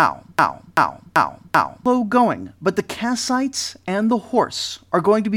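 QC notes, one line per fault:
0.00–1.86 s, broken-record loop: the playback or stream likely stalled and kept resending its last buffered fragment, so a 0.39 s slice of speech repeats exactly four times, already looping at the start, before "going but the"; the audio meant for that span is lost.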